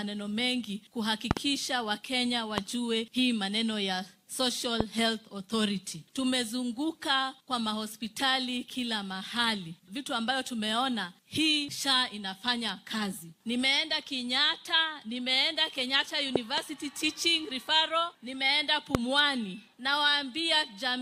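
Loud pops occur at 1.31 to 1.39 s as a quick double, single ones at 2.58 to 2.60 s and 4.81 to 4.83 s, another double at 16.36 to 16.60 s, and a single at 18.95 to 18.97 s. Each peaks at about 20 dB above the programme, most likely from a voltage step such as a switch, plug or static discharge that the downstream circuitry shapes into a thump. Unlike a dropout or digital click, the sound continues unbroken underneath.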